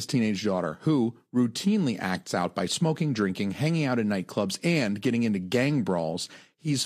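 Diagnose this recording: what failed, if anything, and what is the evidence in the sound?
Nothing in the signal chain failed: the speech holds steady level, continuity and timing throughout, with no audible damage at any stage between capture and playback.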